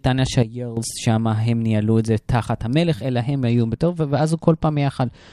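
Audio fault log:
0.43–0.77 s sudden gain jump: sound and noise floor drop together by about 12 dB, likely an unramped gain change; the waveform envelope steps down abruptly, then back up.
3.50–5.32 s Bluetooth SBC bit pool drop: treble dulls and gritty noise rises through the end, fitting a bit pool cut from 31 to 12 (about 88 kbps); the spectrogram's upper bands thin out.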